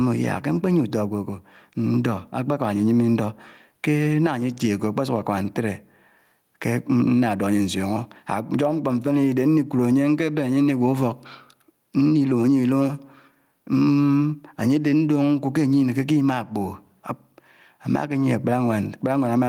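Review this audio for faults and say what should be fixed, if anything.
Gain pumping throughout: the gain ducks by around 10 dB under loud syllables, likely from excessive mic gain driving a fast limiter. To prevent it, lower the input gain so peaks sit well below the limiter threshold, and use slower attack and release settings.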